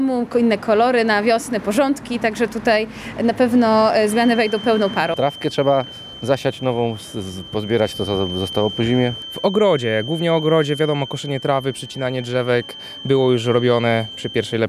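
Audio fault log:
4.04–14.68 s, feedback whistle: from 4.04 s to the end of the clip a thin, steady tone near 3.1 kHz sits behind the sound, roughly 15 dB below it, slowly swelling and fading in level. The likely cause is a loudspeaker-to-microphone loop held just at its threshold: that one frequency keeps recirculating with almost exactly enough gain to sustain itself, so it rings on continuously instead of dying away or building into a howl.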